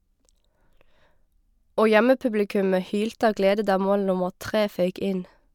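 Listening to the speech recording, nothing stood out as a technical problem at any point.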